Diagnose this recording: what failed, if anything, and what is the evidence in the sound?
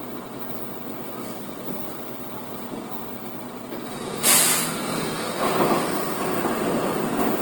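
The codec stage shows damage throughout: tonal parts of the sound turn rough, grainy and noisy rather than swirly, while the band stays full, reaching about 20.4 kHz. This is likely Opus compression in CELT mode, filling starved bands with folded or noise content, which fits roughly 16 kbps.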